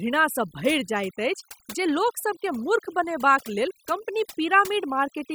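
From start to finish, the background falls to near silence speckled with twinkling artefacts. This is overdone noise removal: the reduction was set so hard that frequency bands near the noise estimate were pulled down or cut, taking quiet voice detail with them.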